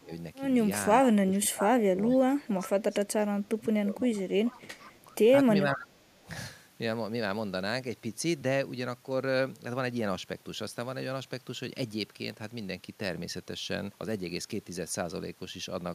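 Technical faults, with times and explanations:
0.0–0.11 s, 1.26–1.97 s, 2.17–5.12 s, 5.64–6.26 s: speech suppressed in double talk. The voice dips by roughly 15 to 25 dB, likely an echo canceller ducking during overlapping talk.
2.12–2.17 s, 2.61–2.69 s, 4.51–4.62 s, 4.79–4.84 s: echo leak. Faint scraps of the voice return 458 ms late, about 20 to 30 dB down, likely from incomplete loudspeaker echo cancellation.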